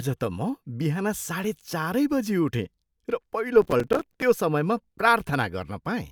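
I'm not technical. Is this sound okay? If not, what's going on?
No. From 3.62 to 4.22 s there's processor overload crackle: the computer fell behind, missing roughly twenty tiny slices of audio, each around 5 ms, and filling them with silence. Unlike one clean dropout, it's a gritty burst of many small gaps riding on the speech.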